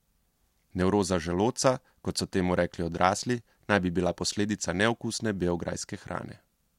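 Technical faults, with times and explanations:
No technical faults are audible in this speech recording.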